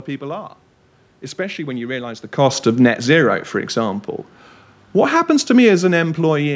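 Automatic gain falling, 2.32 to 3.13 s just before "for example", then 4.96 to 6.51 s. The gain control judged the input too loud and eased down about 3 dB, then about 5 dB, so speech and background sink together.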